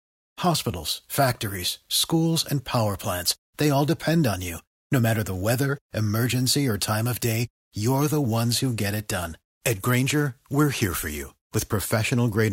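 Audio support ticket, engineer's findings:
Bluetooth SBC bit pool drop, 8.34 to 11.23 s, starting right after "of day you're the". Speech treble dulls and gritty quantisation noise rises, then clears. Probable component: Bluetooth link under congestion. The sound fits a bit pool cut from 31 to 15, near 105 kbps, which starves the upper sub-bands and coarsely quantises the rest. Unlike a plain bandwidth limit or low-pass, the grit rides on the remaining speech and both recover together.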